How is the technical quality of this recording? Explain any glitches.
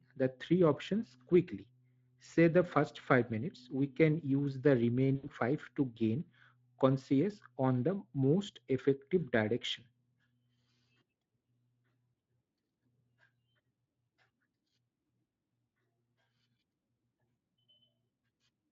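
The recording has one glitch: VoIP packet loss concealed by the speech codec, from about 5.15 s to 5.28 s, between "we can use the" and "five to gain conscious". Roughly 80 ms of the stream went missing, which fits four lost 20 ms frames. The decoder, here a Speex codec at 23.8 kbps carrying light coding damage, filled the gap by repeating its last pitch and spectral envelope at falling gain. The result is a brief stretched sound that fades, and the voice sounds thin and distorted for a short stretch after packets resume, until the decoder's state catches up.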